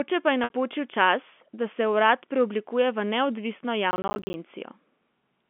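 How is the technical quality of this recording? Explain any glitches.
Two glitches stand out over a telephone-band line, where G.711 telephone coding limits the sound to roughly 200 Hz to 3.4 kHz.

From 0.44 to 0.50 s, just after "pa je", a brief buzzy hold appears. This is packet loss with pitch repetition: 60 ms went missing, which fits about three packets, and the receiver repeated the last pitch period while fading it.

From 3.91 to 4.34 s, a gritty crackle tears through the sound. This is processor overload crackle: the processor missed around twenty 10 ms buffer deadlines, and each miss left a hard-edged gap of silence.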